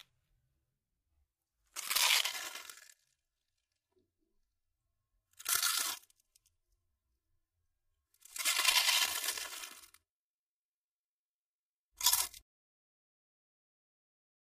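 From 2.26 s to the end, channel delay causes comb filtering. One channel runs roughly 3 ms late, and summing to mono cancels shared content at evenly spaced frequencies, starting near 150 Hz and repeating about every 300 Hz. The sound turns hollow and phasey.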